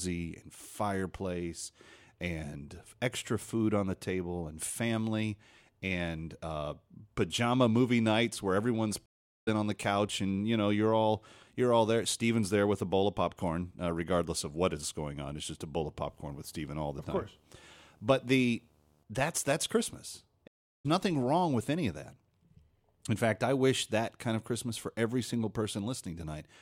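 After "movie nights where everyone's", the audio drops out for 0.41 s from 9.06 s and picks up at "on the couch and" roughly 0.3 s further on. This is a stream reconnect: the connection broke and a fresh decoder restarted mid-stream. From 16.09 to 19.04 s, between "just a bowl of" and "that's that's", a 75 Hz buzz with hash above it sits about 35 dB below the signal. This is video or display buzz, with a screen or video cable coupling into the audio at its field rate. A second stream reconnect at 20.48 s leaves 0.37 s of silence, and the audio resumes roughly 0.3 s later.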